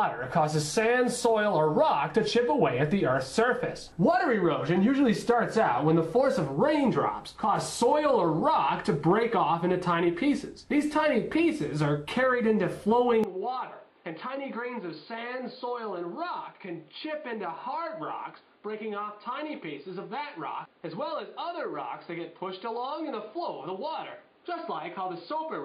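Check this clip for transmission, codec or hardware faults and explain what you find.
One hardware fault: the input most likely switched to a poorer device at 13.24 s, with no gap, and stays there to the end. That device passes nothing above 4.8 kHz, so the sound turns dull and boxy, drops about 10 dB in level, and picks up a new noise floor roughly 30 dB below the signal.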